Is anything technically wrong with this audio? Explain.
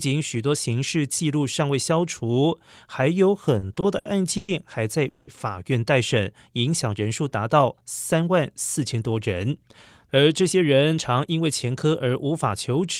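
Yes, there are three kinds of network-related problems in this speech clip.

From 3.59 to 4.51 s there are repeated stalls (stutter). The delivery drags in five separate hiccups totalling 250 ms, the longest about 110 ms, so roughly a quarter of that stretch is filler. Packets were arriving late or too slowly, the jitter buffer kept running dry, and each time the receiver stretched the last bit of sound to cover the wait. Nothing is actually lost, but the speech stumbles.

At 5.08 to 5.30 s there's a short call audio freeze. For about 190 ms the sound hangs on a continued buzz or hiss rather than going silent, then picks up exactly where it left off, so the speech ends up about 190 ms later than before. That's most likely packets held up in transit emptying the jitter buffer, with the receiver filling the hole until they turned up.

Then there are two jitter buffer speed-ups, one from 7.48 to 8.29 s running at about 110% speed and one from 10.19 to 11.40 s at about 108%. 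Each trims roughly a tenth of a second. The buffer was holding more audio than it wants, so the receiver cut tiny pitch-period-sized slices over and over to catch up. The pitch stays put, but the speech sounds noticeably hurried in those stretches.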